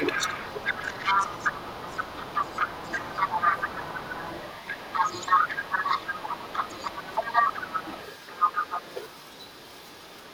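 An echo canceller that likely could not tell the talker apart from the far end's loudspeaker sound, while both spoke at once, pulls the opening down. From 0 to 0.38 s the speech is suppressed in double talk. The canceller treats the near voice as echo and attenuates it, so the start of the speech sinks by roughly 15 dB at its deepest and sounds dipped for that brief stretch.

The other side's voice leaking through runs from 0.05 s to the end of the clip. The device is playing the far end over a loudspeaker, and the canceller likely left part of that signal in the microphone feed. A second voice sits underneath the talker throughout, roughly 10 dB below the main speech.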